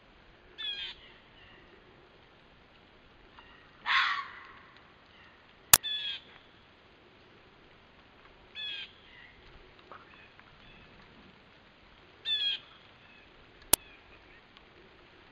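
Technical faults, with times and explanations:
5.74–5.76 s and 13.74 s, uninitialised buffer: blocks got played before any audio was written, so leftover memory came out as brief digital junk, about 23 ms then 6 ms, fitting 1024- and 256-sample buffers.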